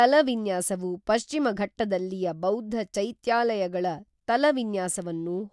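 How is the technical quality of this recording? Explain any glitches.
Nothing in the technical quality of the recording stood out on listening, so there are no glitches to explain.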